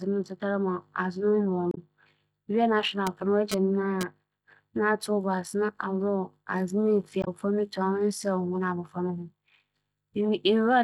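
A speech recording carrying two kinds of fault. Damaged data in a compressed stream shows up twice, from 1.69 to 1.78 s and from 7.20 to 7.28 s: corrupted bytes make the decoder misread those frames and lose sync until it finds the next valid frame header, producing a short glitch. On a spectrogram each appears as a brief vertical smear of broadband or oddly banded energy that breaks the speech harmonics, and the waveform shows an abrupt discontinuity where the signal resumes. Between 3.07 and 4.03 s there is GSM phone buzz, a hard, raspy buzz at about 217 Hz. It is sitting about 4 dB below the speech, so it is very prominent. A nearby 2G handset transmitting in bursts gets its radio pulses rectified by the audio circuitry. Because the buzz comes and goes rather than holding steady, the phone was likely transferring data rather than on a call. A spectrogram shows a comb of evenly spaced horizontal lines at 217 Hz and its many harmonics, switching on and off in blocks. 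The waveform shows a dense train of sharp rectangular pulses riding on the speech.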